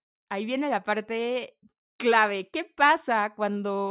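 No technical faults were found anywhere in this speech recording.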